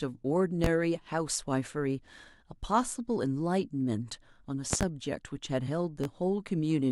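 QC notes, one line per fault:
0.64–0.68 s, loud pop: a single sharp pop about 20 dB above the speech, likely from a voltage spike such as a switch or static discharge, with the speech continuing underneath. On the waveform it is one tall, narrow spike. On the spectrogram it is a thin vertical line across all frequencies.
4.73–4.85 s, loud pop: two pops in quick succession, peaking about 20 dB above the speech, likely from a contact glitch. The waveform shows two spikes, and the spectrogram shows two broadband vertical stripes.
6.04–6.08 s, loud pop: one softer pop about 10 dB above the speech, likely from a smaller electrical pulse. It appears as a shorter spike and a fainter vertical stripe.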